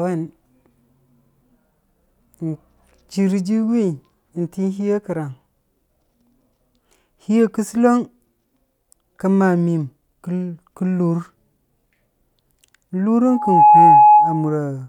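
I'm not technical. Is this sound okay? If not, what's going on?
No. From 13.27 to 14.57 s, near the end of the speech, there is loudspeaker feedback squeal: a microphone picks up the loudspeaker it feeds and keeps re-amplifying one pitch, here 843 Hz. What sets it apart from a steady whine or hum is that it isn't there from the start. It swells up from nothing in under half a second and ends up clearly louder than the speech.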